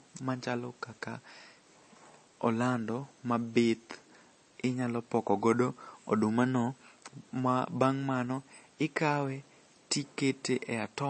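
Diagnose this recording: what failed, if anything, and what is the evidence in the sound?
The codec stage likely failed: the speech passed through MP3 compression at a bitrate low enough, around 32 kbps, that the encoder ran short of bits. Throughout, nothing survives above 8.3 kHz, and weak frequency lines flicker between frames, giving plainly audible watery, swirling artefacts.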